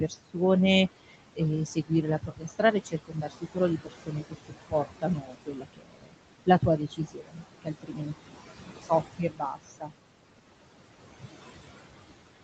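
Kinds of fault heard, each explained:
Noise suppressor artifacts: Frame by frame, the suppressor lowers the bands it judges to be steady room noise, by about 21 dB here. The background sinks in pauses and swells back under speech. Unlike ordinary room noise, the residue tracks the talking.
Speech cut by the noise suppressor: The suppressor mistakes parts of the speech itself for noise and pulls them down by up to about 22 dB, in stretches between 1.66 and 9.93 s. Syllables sound swallowed or faint, fading out rather than stopping abruptly like a dropout.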